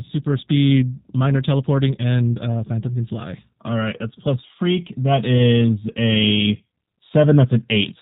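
From start to finish the speech carries plainly audible G.729 codec damage. The voice is rebuilt from a vocal tract filter, a pitch predictor and a few pulses per 10 ms frame instead of being coded as a waveform, and the roughness that leaves fits an 8 kbit/s stream. Nothing above 4 kHz comes through. A simple low-pass filter would only dull the sound; here the voice is also grainy and faintly synthetic.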